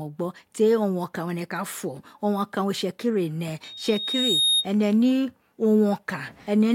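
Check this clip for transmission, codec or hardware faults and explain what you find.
One hardware fault is present in this speech clip: a loudspeaker feedback squeal from 3.64 s to 4.67 s. A microphone is picking up the loudspeaker it drives, and at about 3.7 kHz the loop gain climbs past one, so that frequency reinforces itself on each pass. It is heard as a single high tone that swells over most of a second until it sits a few decibels above the speech. Unlike a steady interference whine, which holds a constant level, this tone grows out of nothing.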